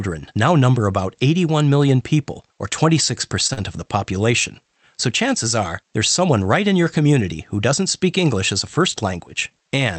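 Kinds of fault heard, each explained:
Short stall from a late packet: a packet arrived late, so the jitter buffer ran dry and the receiver held the last sound for about 18 ms before resuming where it left off, heard around 3.47 to 3.51 s as a brief drawn-out hold with nothing lost.
Short concealed packet loss: about 40 ms of audio never reached the decoder, so the receiver extrapolated from the preceding sound to cover the gap and then blended back, giving a short smear or wobble at 3.53 to 3.59 s, just after the stall.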